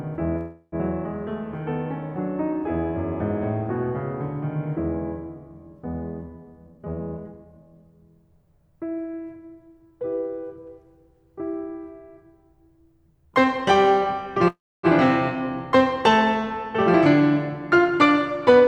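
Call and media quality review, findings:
Call audio freeze at 0.37–0.75 s and 14.48–14.86 s. The music stalls into a fading buzz for about 0.35 s each time, then resumes where it stopped. Nothing is lost, but playback now runs about 0.35 s late. The second freeze decays to silence for its last 0.28 s. Likely cause: jitter buffer running empty while packets were held up.

Jitter buffer speed-up at 6.67–7.63 s. Playback runs at 135% speed with the pitch unchanged, and the tempo audibly rushes. The buffer trims repeated pitch-period slices, about 0.3 s in total, to shed the excess delay built up after the late packets arrived.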